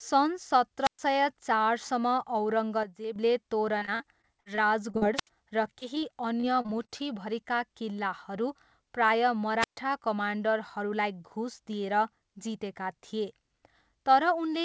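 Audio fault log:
0.82 to 0.99 s, 5.14 to 5.28 s and 9.60 to 9.77 s, wireless microphone squelch dropout: each time there's a quick swell of hiss as the radio link fades, then the receiver's squelch shuts the output. You get holes of near silence of about 118 ms, 75 ms and 132 ms, and the last one comes right after "किल्लाहरू प्रायः". After each hole the speech comes back.
2.83 to 3.16 s, sudden gain jump: the level drops by about 8 dB in a single step, and the background noise drops along with the speech. That's likely a digital gain change applied with no ramp, so nothing smooths the transition.
3.78 to 5.03 s, repeated packet loss (robotic sound): eight gaps land in a row, the longest about 43 ms, adding up to about 240 ms. The receiver patches each one by extending the last bit of sound, and about 19% of the stretch is patched. That's why it comes out choppy.
5.79, 5.95 and 6.00 s, short concealed packet loss: these are three separate 20 ms losses. 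Each hole is filled by carrying the previous sound forward and then blending back into the real audio. You hear each one as a tiny smear or wobble.
6.40 to 7.01 s, repeated packet loss (robotic sound): this is a second, shorter run of five gaps, the longest about 33 ms and about 120 ms missing in total. About 18% of the span is patched, and it has the same choppy sound.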